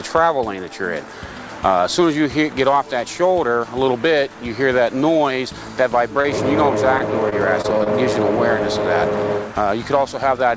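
At 6.22 s there is a short concealed packet loss lasting about 20 ms. A piece of the stream arrived too late to decode. The receiver covered the hole by extending the last sound, copying its pitch where there was one and shaped noise where there was not, and then blended back into the real audio. It is a single, isolated brief smear or wobble. That isolation is what sets it apart from the choppier stretch that follows.

From 6.98 to 7.88 s the trouble becomes repeated packet loss (robotic sound). Five separate holes fall within under a second, the longest about 24 ms, and together they make up about 11% of that span. Each patch is an extension of the sound just before it, and the next dropout arrives before the ear settles. The sound turns choppy, with small pieces missing. A single glitch heals immediately, but this one keeps stuttering through the whole stretch. The band tops out at 8 kHz throughout, which fits a G.722 call codec.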